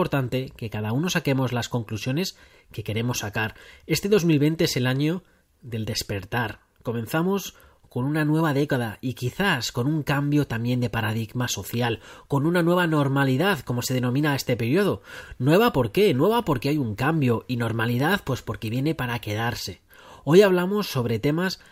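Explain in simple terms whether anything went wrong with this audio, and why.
Yes, two brief problems: a bit error spike at 4.04 s and another at 18.00 s. A single stored digit flipped, so one sample, then three in a row, jumped and snapped back, giving one sharp tick unrelated to the speech, unlike a dropout, where sound briefly vanishes.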